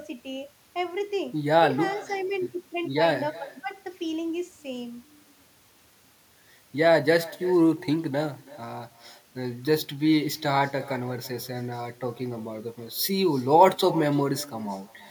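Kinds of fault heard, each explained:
Echo with no canceller: Far-end speaker sound reaches its microphone unremoved. Speech returns a third of a second later, about 20 dB quieter, thinner.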